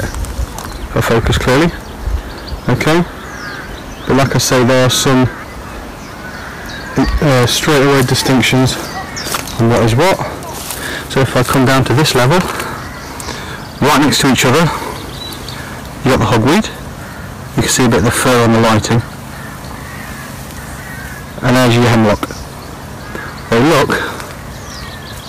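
Hard clipping runs through the whole clip. The audio is driven about 32 dB past what the stage can pass, so its peaks are sliced flat. Roughly a fifth of the samples hit the ceiling. Every loud moment turns into a harsh, buzzing fuzz.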